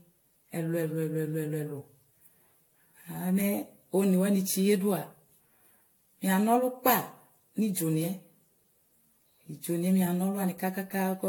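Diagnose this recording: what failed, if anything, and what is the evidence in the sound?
What's gone wrong here is at the codec stage, and it runs through the whole speech clip. There's a swirly, hollow smear and blunted consonant attacks, much worse than the bandwidth suggests, since content still reaches about 18.7 kHz, which fits AAC-LC at around 96 kbit/s. That mismatch is the giveaway for generation loss. The likely cause is roughly ten decode and re-encode passes, each quantising on a shifted frame grid, so noise and spectral holes pile up.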